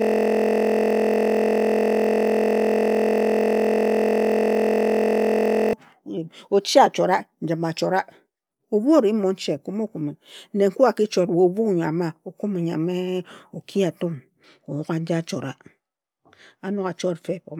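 Speech, but from the start to 5.73 s it's a system hang loop: one 23.2 ms slice repeats as a 43 Hz buzz, which fits a 1024-sample buffer.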